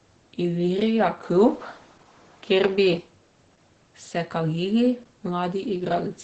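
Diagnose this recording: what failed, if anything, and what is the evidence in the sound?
The codec stage failed. Opus voice compression runs through the whole clip. The speech sounds muffled, hoarse and slightly robotic. Nothing is heard above 8.7 kHz, so the band is wideband, not full. The damage is heavy. It fits SILK linear-prediction coding at around 10 kbps, in 20 ms frames. At that rate the excitation is coded coarsely, which roughens the voice. Losing the top of the spectrum is what dulls it.

From 1.25 s to 2.97 s the tone changes. The top of the band drops further, to about 7.6 kHz. A faint new noise floor appears, roughly 45 dB below the speech. The level shifts by a few dB. There is no gap at either boundary. The cause is likely an input switched to a poorer device at the capture stage, which then switched back. The narrower band, its own noise and the level step all point that way.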